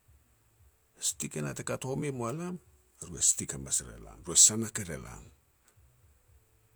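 No audible technical faults anywhere in the speech.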